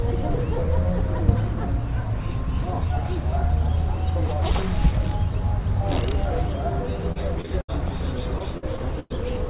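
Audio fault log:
7.12–7.70 s, repeated packet loss (robotic sound): four gaps, longest 73 ms, patched by extending prior audio over 30% of the span, giving choppy, robotic texture.
8.38–9.12 s, repeated packet loss (robotic sound): five gaps, longest 104 ms, concealed by repeating preceding sound over 24% of the stretch, within the call path's 4 kHz band.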